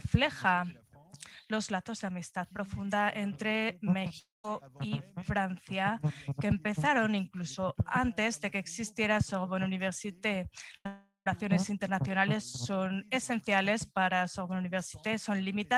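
At 4.19 to 4.45 s comes what is likely a long network dropout. About 250 ms of audio never arrived, and the receiver stretched the last sound into a fading buzz or hiss before roughly 170 ms of silence. On a waveform the envelope decays to a flat line, and a spectrogram shows a smeared, frozen spectrum thinning out to an empty band.

At 10.77 to 10.86 s, a burst of packet loss drops about 70 ms. The gap is filled with a held, dimming copy of the preceding sound, so the audio jumps ahead slightly. This appears as a brief horizontal streak of repeated spectral content with a shrinking waveform.

A second likely long network dropout follows almost immediately, from 10.87 to 11.30 s, with about 390 ms lost. Again a fading buzz or hiss gives way to about 130 ms of silence, seen as a decaying smear and then a blank gap before the sound resumes further on.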